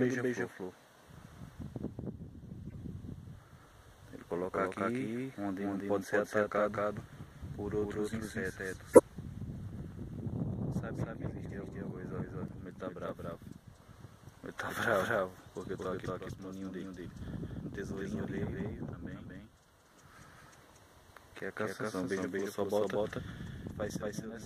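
The audio carries a doubled audio track throughout: a second, equally loud, full-band copy trails by around 200 ms with no decay, likely from a slower capture path. Corrupt frames were decoded at two points, one from 2.65 to 2.77 s giving a faint glitch across several frames, and one from 8.93 to 9.00 s giving a loud, brief glitch.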